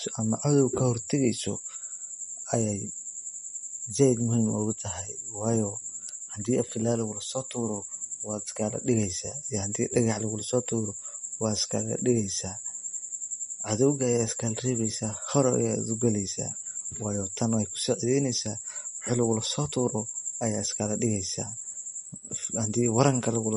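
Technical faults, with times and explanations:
Throughout, MP3 compression: swirly, watery speech with a hard treble ceiling near 10.6 kHz on the spectrogram, likely from a low bitrate around 40 kbps.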